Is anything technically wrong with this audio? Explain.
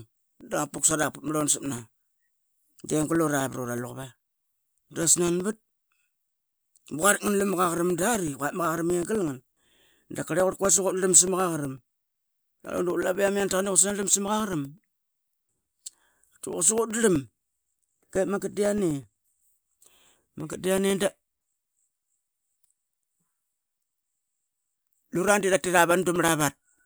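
Yes. From 0.16 s to 26.79 s the speech carries a steady ticking, one click every 0.125 s, eight per second. These are periodic USB or driver dropouts: a recurring system task stalls the audio path, and each time a couple of milliseconds are replaced by silence, audible only while sound is present.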